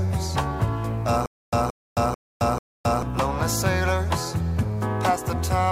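From 1.26 to 3.03 s there's a stutter with silent gaps: a 174 ms burst repeats four times, about every 441 ms, with dead silence between, likely a stalled stream retrying.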